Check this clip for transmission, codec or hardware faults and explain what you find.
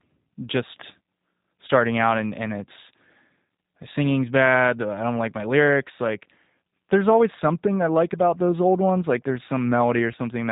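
One codec fault runs through the whole speech clip. G.729 codec damage is plainly audible throughout. Nothing passes above 3.8 kHz, and the speech has a rough, buzzy, synthetic edge because it is rebuilt from a filter and sparse pulses, which fits an 8 kbit/s codec. That roughness sets it apart from simple band-limiting.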